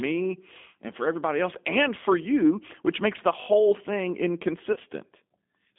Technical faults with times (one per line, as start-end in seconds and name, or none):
0.00-5.78 G.729 codec
4.72-4.80 VoIP packet loss concealed by the speech codec